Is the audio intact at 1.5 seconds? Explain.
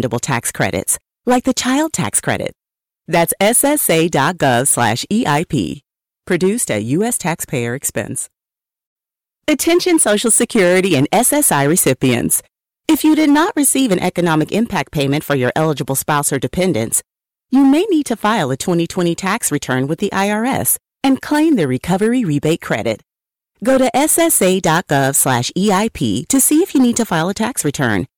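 No. Hard clipping runs through the whole speech clip, including 1.5 s. The signal is driven about 8 dB past full scale, so a small share of peaks is cut flat, giving crackle on loud syllables. The waveform shows squared-off tops, and the spectrogram shows smeared high-frequency energy on those peaks.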